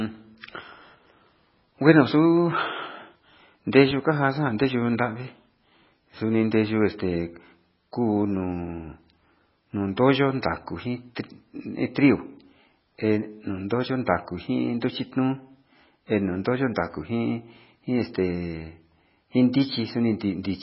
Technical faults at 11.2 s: MP3 compression; pre-echo

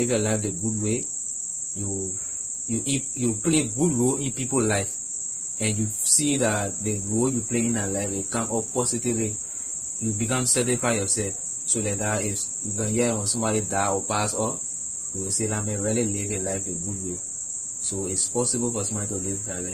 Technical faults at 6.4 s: transcoding between lossy codecs

